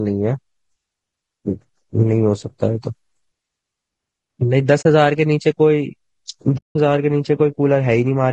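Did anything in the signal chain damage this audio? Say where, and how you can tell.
Yes. At the codec stage, the whole clip has low-delay AAC compression, likely AAC-ELD at a low rate fitting about 32 kbps. The speech sounds plainly rough and grainy. On a spectrogram there is noise filling the gaps between the pitch harmonics and a thin, artificial-looking top band.

Further along, in the network or storage stage, there is AAC frame loss with muting at 4.81 to 4.86 s (40 ms) and at 6.57 to 6.76 s (180 ms). Lost frames were decoded as silence, and the overlapping windows fade the sound out and back in. The waveform shows a tapered gap, and the spectrogram shows a blank vertical band.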